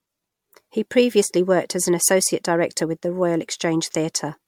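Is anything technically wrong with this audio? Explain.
Yes. Throughout the speech, the audio was likely re-encoded many times with MP3, around seven passes, causing generation loss. Each pass re-quantises on a shifted frame grid, so smearing, swirly hollowness and blurred consonant attacks build up, worse than the 96 kbit/s-like quality suggests, with nothing above 19.9 kHz.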